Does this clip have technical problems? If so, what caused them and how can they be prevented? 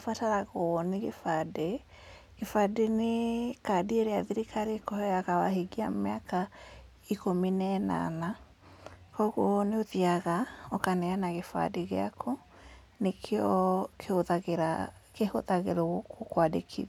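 No, nothing stood out as a technical problem on listening, so there is nothing here to trace back or prevent.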